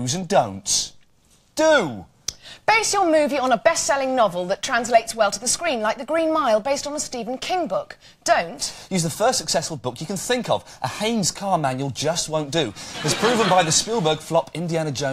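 Nothing technically wrong turns up anywhere in this audio, so there's no fault to point to and no time or cause to give.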